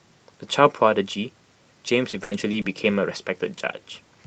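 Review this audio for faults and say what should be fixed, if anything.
Repeated packet loss (robotic sound) runs from 1.93 s to 3.03 s in this speech. Four gaps open inside that stretch, totalling 160 ms of missing audio, with the longest lasting 80 ms. The receiver fills each hole by extending the previous sound, so about 15% of the span is concealment rather than real signal, roughly a fifth of a second in all. Because the gaps follow each other closely, the speech turns choppy and machine-like. The call path itself is band-limited to about 8 kHz, which fits Opus at around 32 kbps. To prevent the loss, stabilise the network link and enable Opus in-band FEC with a larger jitter buffer.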